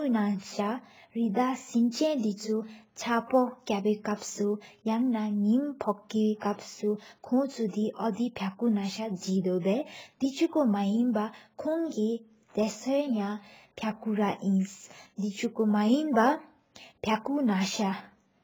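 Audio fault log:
throughout, AAC compression: The audio was likely squeezed through an AAC-LC encoder at a very low bitrate, with heavy damage consistent with roughly 16 kbps. Short of bits, the coder throws away everything above 7.6 kHz and coarsely quantises what remains, so the speech sounds dull and muffled, with sibilants losing their edge and a smeared, warbling texture on sustained vowels where the spectrum is patched rather than faithfully coded.
throughout, sample clock jitter: The converter's sampling clock wanders by a few microseconds, so each sample is taken slightly off its proper instant. The resulting error scales with how fast the waveform is changing, leaving a rough, hissy layer sitting around 35 dB below the speech. It swells on loud passages and bright consonants, where the waveform moves steeply, and drops away in the pauses, giving the voice a grainy, unsteady sheen.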